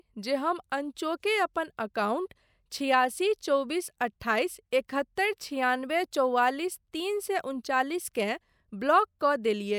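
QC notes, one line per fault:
No faults heard anywhere in the speech.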